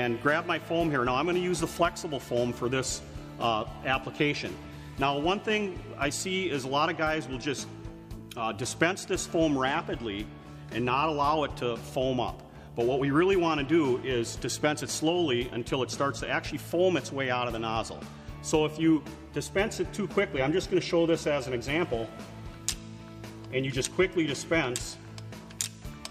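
No technical faults are audible.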